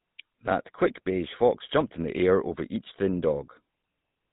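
From the first moment to the last, the speech has been through a GSM full-rate codec, the original mobile-phone voice coder, and the damage is plainly audible. It rebuilds the voice from a vocal-tract model fed by a sparse train of regularly spaced pulses, throwing away most of the excitation detail, so everything comes out buzzy and gravelly. Nothing survives above 4 kHz either, which leaves it muffled and boxy, and the low bitrate, which fits about 13 kbps, shows in that coarse texture.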